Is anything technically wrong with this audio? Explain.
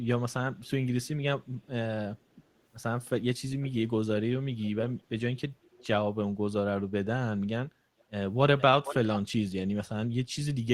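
Yes. Echo leak occurs at 0.57–0.70, 1.43–1.68, 3.61–3.81, 4.61–5.06, 5.77–5.87, 8.00–8.04, 8.58–8.62 and 8.84–8.95 s: faint-to-loud delayed copies, 435–489 ms late, mostly well below the speech, nearly as loud at 8.84 s. A far-end echo canceller likely let loudspeaker pickup through.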